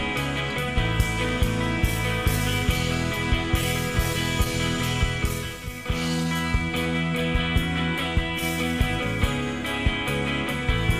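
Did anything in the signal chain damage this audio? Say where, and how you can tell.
No, no damage anywhere.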